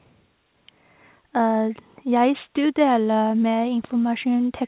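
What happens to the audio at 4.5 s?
Nothing goes wrong at 4.5 s: the speech carries on intact through the call path, whose telephone-band coding leaves nothing above 4 kHz.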